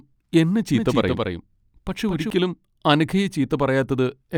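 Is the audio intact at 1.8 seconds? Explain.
No. At 1.8 seconds the speech is heard twice, a doubled audio track that runs from 0.74 to 2.30 s. A second full-band copy trails the original by about a fifth of a second and sits roughly 5 dB quieter. It has no decay or room colour, so it sounds like a clean duplicate rather than an echo. The cause is likely a second capture path running late, or an edit that left two copies out of step. The copy starts and stops abruptly.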